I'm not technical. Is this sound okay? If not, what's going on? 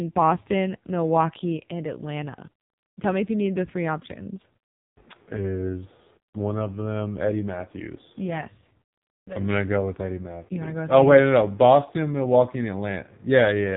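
No. For the whole clip the speech sounds thin, boxed-in and buzzy, like an old mobile phone call, with a robotic, synthetic edge to the voice. This is the AMR narrowband mobile codec, the squeeze used on older phone networks. It throws away everything above about 3.8 kHz, which removes the crispness, and rebuilds the voice from a rough model at a very low data rate, so the damage here is heavy.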